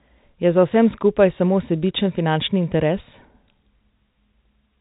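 Nothing stood out on listening to this speech, which has the narrow band of G.711 telephone coding with no content above 3.8 kHz.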